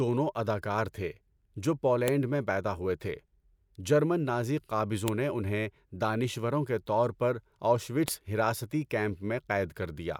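A sharp, loud click snaps through the speech at 2.08, 5.08 and 8.08 seconds, spaced exactly 3 s apart regardless of what the talker is doing. This is a file header played as audio: separately stored speech pieces were joined without stripping their headers, so those bytes sound as samples.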